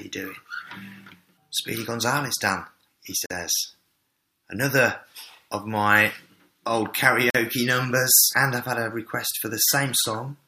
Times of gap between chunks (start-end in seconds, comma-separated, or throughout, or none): 3.26-3.30, 7.30-7.35